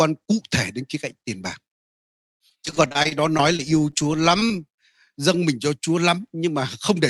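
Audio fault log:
2.17–3.95 s, repeated packet loss (robotic sound): a rapid run of gaps, the longest about 26 ms, with roughly 15% of the stretch rebuilt by extending the previous sound. It comes out choppy, with pieces missing. On a spectrogram, repeated smeared harmonic blocks and brief holes interrupt the Opus band, which stops near 12 kHz.
4.03–4.57 s, jitter buffer slow-down: the receiver stretched the audio by about 46 ms to rebuild its reserve, so this stretch plays at 93% speed with unchanged pitch. Sounds are drawn out. The waveform shows repeated, near-identical pitch cycles, and the spectrogram shows elongated, flat harmonics.
4.40–4.43 s and 4.48–4.52 s, short concealed packet loss: about 20 ms went missing each time, inside the slowed stretch, and was patched by continuing the preceding sound. Each patch is heard as a quick smear or wobble. Both appear as short blurred spots where fine detail disappears, with a soft seam on either side.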